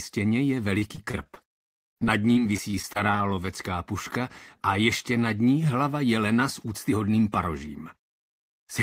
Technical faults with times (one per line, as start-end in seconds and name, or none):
0.79-3.49 repeated packet loss (robotic sound)